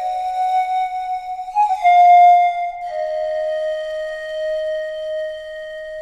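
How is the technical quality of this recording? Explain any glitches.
No glitches or technical faults can be heard anywhere in the recording, and the signal stays intact and continuous throughout.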